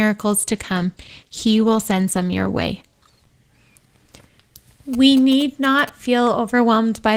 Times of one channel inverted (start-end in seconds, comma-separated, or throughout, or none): none